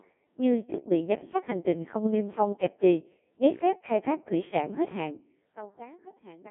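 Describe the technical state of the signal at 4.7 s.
At 4.7 s the speech is passing through a Codec 2 vocoder, present for the whole clip rather than at that instant alone. Only pitch, voicing, energy and a coarse spectral envelope survive, and the decoder rebuilds the voice from sine waves, so the original waveform is gone. The result is heavily robotic and buzzy, confined to a 150 Hz to 3.4 kHz line band with nothing above 3.6 kHz. The coarseness fits a 1.6 kbit/s mode.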